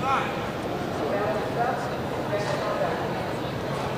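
No technical fault can be heard anywhere in the audio. Nothing in the recording or playback chain draws attention to itself at any moment.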